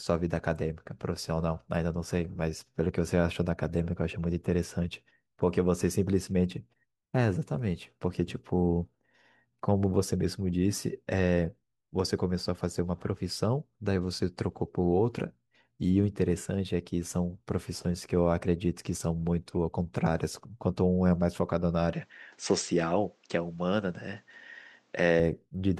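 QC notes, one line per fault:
21.93–25.2 s, input switched to a poorer device. The speech turns abruptly duller, with nothing above 8.4 kHz. No gap at the change and no level jump. A faint new noise floor appears, roughly 40 dB down. Likely a narrower-band microphone took over.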